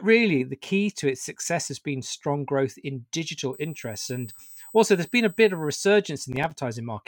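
Just after "been strong growth in", from 3.53 to 5.85 s, a USB whine appears: current drawn in 125-microsecond microframes leaks into the audio path, giving a fixed 8 kHz tone strongest at its 16 kHz harmonic, roughly 20 dB below the speech. Its high, steady pitch separates it from low mains hum.

From 6.33 to 6.55 s comes processor overload crackle. The processor missed about seven buffer deadlines in a row, each leaving a hard-edged silent gap that fits buffers of around 5 ms. The result is a gritty burst, unlike a single clean dropout.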